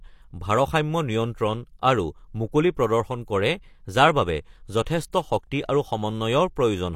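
At 4.83 s a pre-echo appears: a hiss that lasts about 34 ms, to 4.86 s, ahead of a sharp onset in the speech. At 5.12 s a second, shorter pre-echo of about 14 ms precedes another attack. In both places the transform codec's quantisation noise, sized for the loud attack, is spread across its whole block and leaks into the quiet gap beforehand, so each onset sounds softened and smeared.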